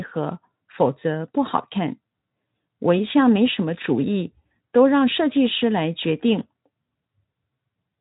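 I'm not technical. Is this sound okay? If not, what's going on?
Yes, nothing here sounds wrong or broken.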